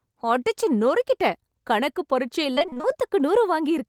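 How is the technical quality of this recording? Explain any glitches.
The recording has one glitch: repeated packet loss (robotic sound) from 2.55 to 2.86 s, right after "அடிச்சு நொறுக்கிட்டேன் கணக்கு". Short dropouts, the longest 22 ms, were each patched by extending the preceding sound, covering nearly half the stretch. The speech there sounds choppy, with pieces missing.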